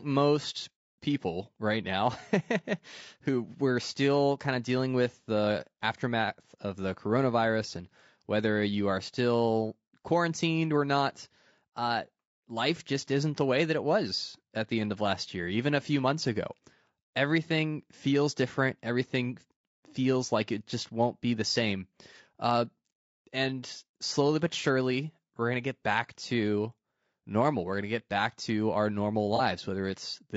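Low-delay AAC compression runs through the whole speech clip, and its damage is plainly audible: the voice sounds rough and grainy, with noise filling the gaps between harmonics and a thin, synthetic top band. This likely comes from AAC-ELD at a low rate, around 32 kbps, where short frames resolve pitch poorly. AAC frame loss with concealment follows from 29.36 to 29.41 s, right after "back to our normal". The decoder filled the gap by extending the previous good spectrum, leaving a brief smeared, noisy patch of about 30 ms, which fits a single lost frame.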